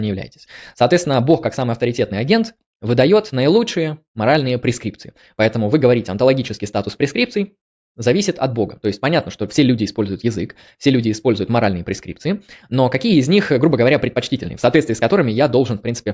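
No technical faults can be heard anywhere in this speech, so there is nothing to describe in time order.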